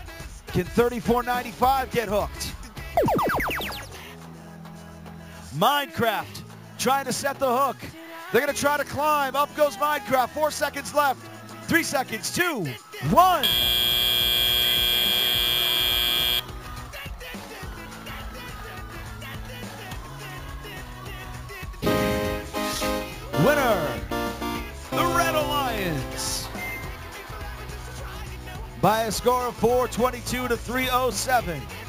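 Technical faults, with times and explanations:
Throughout: imaging from sample-and-hold upsampling. Samples were repeated unsmoothed, which fits a 16 kHz source. Mirrored spectrum fills 8 to 16 kHz, about 14 dB down, as metallic fizz.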